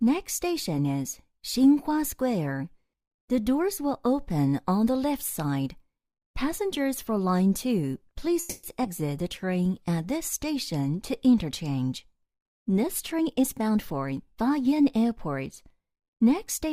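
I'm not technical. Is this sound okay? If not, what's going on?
No, there are four delivery problems, all in the second half.

Call audio freeze, 8.39 to 8.65 s: the sound stalls for about a quarter of a second. The last bit is stretched into a short fading buzz, and then the audio continues exactly where it stopped, with nothing lost. The likely cause is that the data carrying the sound arrived late and the receiving side's holding area ran empty, so it filled the gap with a continuation of what it had.

Skip ahead, 8.83 to 8.86 s: just after that stall, the playback jumps forward. A small piece of sound, well under a tenth of a second, is gone, and the two sides are joined almost directly, so you hear a lurch rather than a pause. A stretch of audio was dropped, either lost on the way or discarded by the receiver while later audio was already waiting.

Jitter buffer slow-down, 9.23 to 9.85 s: for a little over half a second the sound plays at about 92% of normal speed, with the same pitch. 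The receiver was rebuilding its reserve by repeating tiny slices of the sound, adding about 57 ms in total. This makes things sound slightly drawn out, possibly with a faint wobble.

Jitter buffer speed-up, 12.82 to 15.05 s: for about two seconds the sound runs at about 111% of normal speed, again without a change in pitch. The receiver had more audio queued than it wanted and trimmed many tiny pieces, roughly a third of a second in all, to shrink the delay. The result sounds a little rushed.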